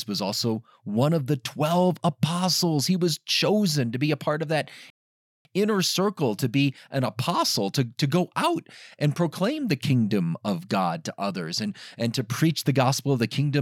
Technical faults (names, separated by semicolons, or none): rebuffering stall